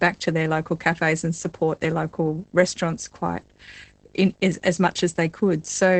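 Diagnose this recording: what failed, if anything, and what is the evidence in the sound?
A low, steady buzz with a rasping hash above it runs through all the speech, sitting roughly 30 dB below the voice. Its fundamental is 50 Hz, a picture field rate. This is video or display buzz: a screen or video cable is coupling into the analogue wiring.

The speech sounds muffled, hoarse and slightly robotic from start to finish, with nothing above 8.6 kHz. This is plainly audible Opus voice compression at the codec stage. The SILK coder in wideband mode codes the excitation coarsely, which points to about 12 kbps in 20 ms frames.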